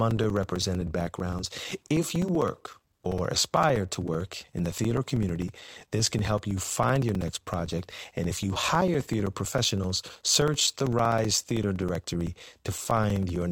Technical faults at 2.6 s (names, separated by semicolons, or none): periodic USB or driver dropouts